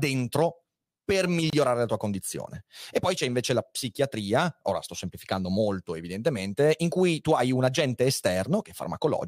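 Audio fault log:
1.50–1.53 s: gap at a join of encoded pieces. A 28 ms silence with smeared edges cuts the speech before "la tua condizione", left by untrimmed encoder delay and padding.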